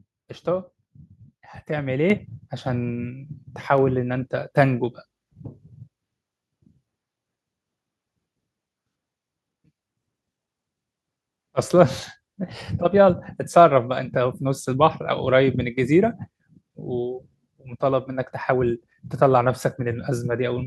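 A speech recording with a microphone volume step-up at 2.1 s: input gain jumps about 6 dB at once, lifting voice and background together, visible as a sudden waveform envelope widening and brighter spectrogram.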